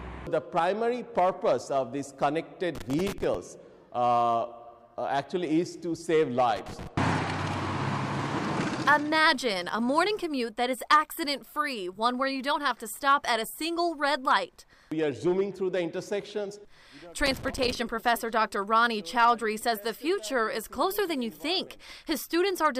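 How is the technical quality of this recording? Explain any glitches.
The recording has three bursts of loose connector crackle: 2.75 to 3.35 s, 6.56 to 6.87 s, and 17.26 to 17.75 s. A worn or dirty contact in the signal path is making and breaking intermittently, so the audio is chopped on and off many times in quick succession, with pops wherever a DC offset jumps. Each event is an irregular, scratchy crackle lasting roughly 0.3 to 0.6 s.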